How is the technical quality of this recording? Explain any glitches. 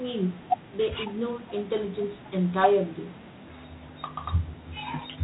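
The technical quality is poor: the speech carries plainly audible G.726 ADPCM coding damage from start to finish. Throughout, nothing above 4 kHz survives, and a harsh, rasping hiss rises and falls with the speech level. The codec sends only the error from an adaptive prediction, and here it seems to use about three bits per sample, which fits 24 kbit/s. That coarse quantisation produces the level-following grit.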